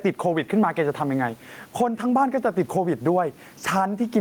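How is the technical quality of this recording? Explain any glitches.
The recording has gain pumping throughout. The level swings by around 10 dB, likely from excessive input gain with a fast limiter clamping each loud syllable. The room noise sits about 42 dB below the speech, and the dynamics are squashed.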